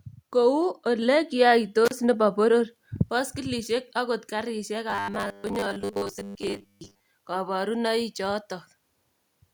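A speech recording with three separate faults. Between 1.85 and 1.92 s there is an intermittent contact: the signal breaks for about 34 ms, with a crackle at each edge and only faint hiss while the line is open. Those crackling edges and the residual hiss set it apart from a network dropout, which tends to fall to clean silence or be smoothed over by concealment. Very soon after, at 2.04 s, comes a microphone volume step-up of about 2 dB, where the input gain was raised in a single jump. Voice and background noise rise together at that instant, which separates it from a speaker moving closer (only the voice would change) and from automatic gain control, which ramps gradually rather than stepping. From 4.90 to 7.04 s the speech turns into robotic sound from repeated short buffers. A rigid, metallic buzz fixed at 100 Hz rides on the words, and that pitch fits a 10 ms chunk being replayed over and over. 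The likely cause is audio arriving too seldom, so the software fills the gaps with repeats while most of the real audio in that stretch is skipped. Low-bitrate codec distortion sounds different: it smears and garbles the sound but does not lock it to one steady pitch that ignores the talker's own intonation.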